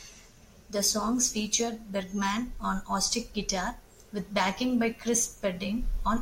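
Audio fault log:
0.30–5.74 s: clock slip clicks. Faint, evenly spaced ticks come about every half second, around ten in all. Each is a single sample dropped or repeated, likely from two free-running clocks differing by roughly 40 ppm. Unlike buffer dropouts, no sound goes missing, and the ticks vanish in pauses.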